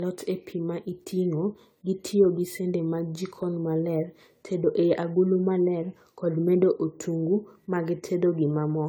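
From start to finish the speech carries a swirly, hollow smear, with consonant attacks blurred and an added noise floor. This is generation loss, likely from re-encoding around seven times through a lossy codec, in a way that fits AAC-LC at 64 kbit/s. Unlike a single low-bitrate encode, which would sound thin but stable, each pass quantised the sound on a shifted frame grid, so spectral holes and smearing stacked up well beyond what that bitrate alone would give, though nothing sits above 20 kHz.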